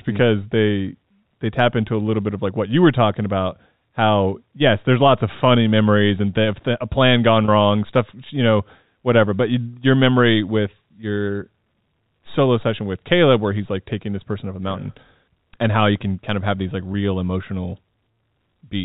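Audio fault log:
7.45 to 7.48 s and 16.93 s: packet loss with pitch repetition. Right after "a plan gone" about 30 ms of speech goes missing, and after "of have these like" about 10 ms does. In each gap the receiver keeps the sound going by repeating the last pitch period, so what you hear is a brief held, buzzy stretch instead of a dropout. The first gap, about three packets long, ends as "wrong stuff you know" begins. On a waveform the gap shows as a run of identical cycles, and on a spectrogram as frozen harmonic lines.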